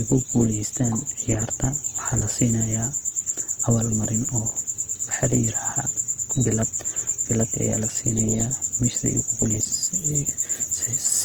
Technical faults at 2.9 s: Opus compression

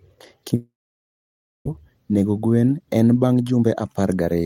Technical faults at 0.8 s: long network dropout

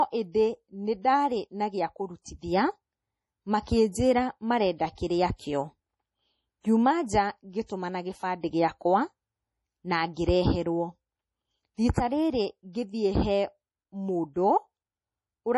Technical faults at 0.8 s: low-bitrate audio saved at a high bitrate

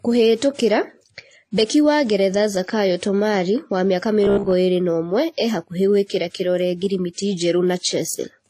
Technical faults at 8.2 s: transcoding between lossy codecs

